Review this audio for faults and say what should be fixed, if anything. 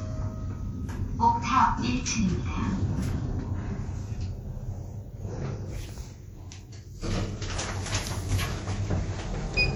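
Ringing, washy smearing and a hiss that breathes with the signal run throughout. This is likely WMA compression. Long transform blocks spread noise over tens of milliseconds, and the damage fits a low rate near 48 kbps. Prevent it by using an uncompressed or higher-bitrate source.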